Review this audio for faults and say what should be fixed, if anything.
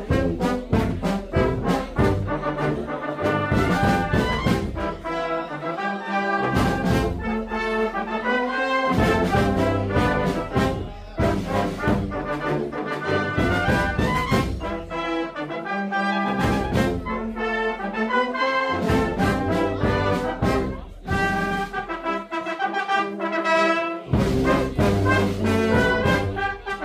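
No faults found; nothing needs fixing.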